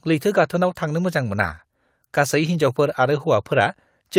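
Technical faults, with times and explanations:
Throughout: clock drift between sender and receiver. The sender's audio clock runs fast, by roughly 5 percent. More sound arrives than the receiver plays out in the same time. Its jitter buffer therefore keeps filling rather than holding steady. The receiver cannot let that backlog grow without bound. It has to keep discarding small slices of speech to catch up. The result is a string of small timing hiccups spread unevenly across the clip.
0.07 to 4.17 s: repeated timing corrections. These are the receiver's answer to the fast sender. It trims short pieces out of the speech again and again. Every edit goes the same way, removing audio, never repeating it. The spacing between them is irregular. Each cut is small and may pass unnoticed alone. Together they push the speech along at about 104 percent of its natural pace.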